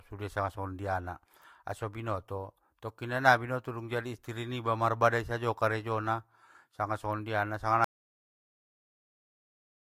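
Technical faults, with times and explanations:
7.84 to 9.88 s, audio dropout to silence: the input was likely lost while recording carried on writing silence, so right after "karejona sanga songondiana sanga" the speech cuts off mid-flow into total silence with no room tone, lasting the final 2.04 s to the end.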